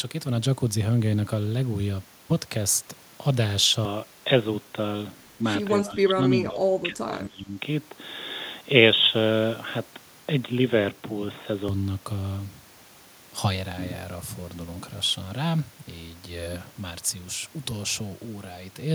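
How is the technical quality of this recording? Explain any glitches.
The recording has two clear glitches, both in the speech, and they overlap.

From 3.85 s to 11.68 s the sound turns narrow and boxy. The likely cause is an input switched to a poorer device, such as a headset in its call profile, which passes a much narrower band. The switch happens with no gap and no audible jump in level, and a faint new noise floor comes with it. On a spectrogram the upper region is cut off for that whole stretch, while the waveform's envelope stays continuous.

Between 5.83 s and 7.56 s the voice dips and breaks up in pieces, adding up to roughly a second and a half, with the deepest drops about 20 dB down. This is likely speech suppressed in double talk. When both ends spoke at once, the echo canceller could not tell the local talker from the loudspeaker echo and turned everything down. The waveform shows ragged notches in the envelope there, and the spectrogram shows the speech energy fading in patches.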